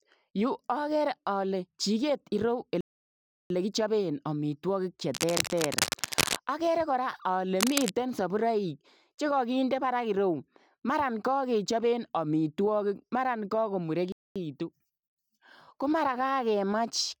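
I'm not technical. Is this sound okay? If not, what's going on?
No. The speech twice drops out completely, at 2.81 to 3.50 seconds, just before "kichapeen amitwagiik che", and at 14.12 to 14.36 seconds. It then carries on. That is likely a Bluetooth stall: the wireless link briefly ran out of audio. Unlike a scratch, it's a clean gap of pure silence.

There are also two patches of cable scratch noise. The first runs from 5.14 to 6.39 seconds, between "kichapeen amitwagiik che" and "agere kora ale". The second runs from 7.60 to 7.90 seconds, before "saburaik che kagindei baraak". Rough rustling sits on top of the speech, about as loud as the speech itself, likely from a worn cable or plug being moved. The speech keeps going underneath rather than stopping.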